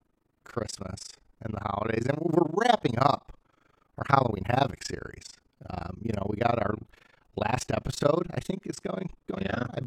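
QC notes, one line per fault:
Throughout, overlap-add ripple: level dips about 60 dB roughly 30 times a second because overlapping frames don't sum to constant gain, a fast flutter or rough tremolo.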